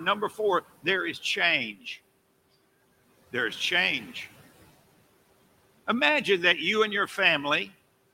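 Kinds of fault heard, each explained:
Speech cut by the noise suppressor: the suppressor mistook speech for noise. It dips about 10 to 12 dB and sounds swallowed at 0.29 and 1.73 s.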